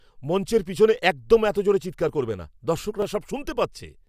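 Just after "মঞ্চের পিছনে", at 0.98 s, a short click appears and recurs every 1.02 s, about four times, through 4.04 s. These are clock drift buffer slips, likely from a clock mismatch of several hundred ppm forcing a few dozen samples to be dropped or repeated.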